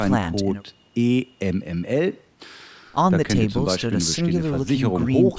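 No faults found; the speech has been through call microphone processing, with the lowest bass rolled off and nothing above 8 kHz, as expected for that path.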